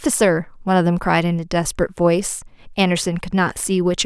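Speech recording, no technical faults audible anywhere in the clip.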